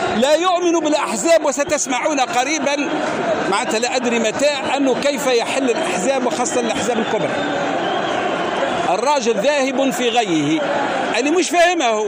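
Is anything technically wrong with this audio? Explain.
No technical faults are audible.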